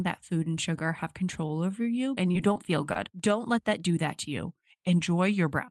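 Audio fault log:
1.47 to 1.54 s, short stall from a late packet: Just after "food and sugar have", the sound is held too long with a faint buzz or dip. A packet arrived late and the jitter buffer ran dry. The receiver stretched the last sound by about 19 ms while it waited, then resumed from the same point. Nothing is missing. The playout delay grew by that amount, and a few milliseconds were later trimmed to catch up.
2.53 to 2.57 s and 2.93 to 2.97 s, short concealed packet loss: The first comes just after "you and you". Each is a brief smear where about 20 ms of audio never arrived, which fits one lost Opus packet. The decoder covered each gap by extending the preceding sound for roughly the same length, then blended back into the real signal. The result is a quick wobble rather than a silence.
4.32 to 5.54 s, drift correction step: Just after "that do that to", the audio suddenly slows by about 5.5% and drops in pitch by close to a semitone, about 98 cents. 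It holds there for about 1.2 s and then snaps back. Speed and pitch move together, which points to a change in playback rate rather than a pitch effect. This is likely clock-matching software stepping its rate to refill a buffer.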